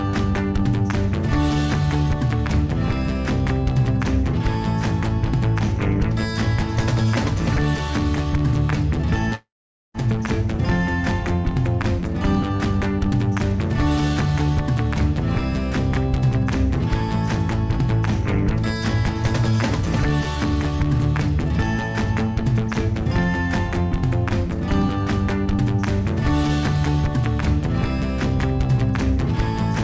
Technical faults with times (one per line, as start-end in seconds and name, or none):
9.35-9.97 long network dropout